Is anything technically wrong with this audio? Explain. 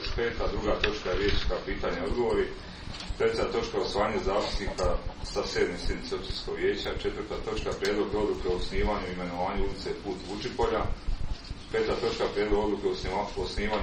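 Yes. Two faults can be heard.

From the start to 2.0 s there is an adaptive stream starting at a low bitrate. The player opened on a cheap version of the stream and switched up once it had measured the connection. Nothing is present above about 6.9 kHz, and the codec smearing is stronger. The sound points to roughly 24 kbit/s AAC. At 2.0 s the quality jumps to something near 96 kbit/s, with no gap.

From 4.85 s to 10.34 s there are periodic USB or driver dropouts. A background task stalls the USB bus or the audio driver every 0.5 s. Each time, a tiny fraction of a millisecond of audio is replaced by silence. There are about ten of these cuts. They are heard as evenly spaced ticks in the sound.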